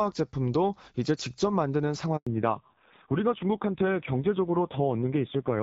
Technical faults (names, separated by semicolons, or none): handover gap; fallback to narrowband